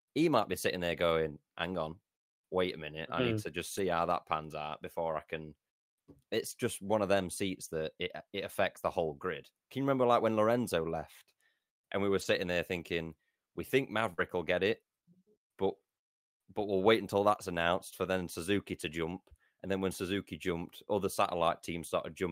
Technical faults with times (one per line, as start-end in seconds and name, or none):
0.51-0.53 lost packet rebuilt from error correction
3.77-3.79 lost packet rebuilt from error correction
12.17-12.23 lost packet rebuilt from error correction
14.13-14.20 burst of packet loss
14.18 lost packet rebuilt from error correction